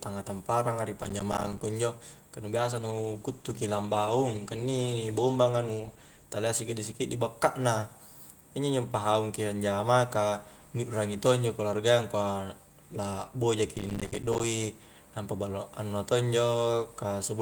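Right after "tamparanga di", from 0.99 to 1.61 s, a processor overload crackle tears through the speech. The processor is missing deadlines on short audio buffers, apparently around 5 ms each, and each miss drops in a hard-edged gap of silence. The run of gaps comes out as gritty crackle.

From 2.54 to 6.31 s, just after "injo ka nu", a call bitrate drop makes the speech rougher and more coarsely coded. The encoder was told to spend far fewer bits. The sound fits a fall from about 32 kbps to about 15 kbps, held at its worst for roughly 3.7 s.

The processor overload crackle returns from 13.76 to 14.44 s. It is a denser burst of silent buffer gaps this time, heard as tearing grit until the load clears.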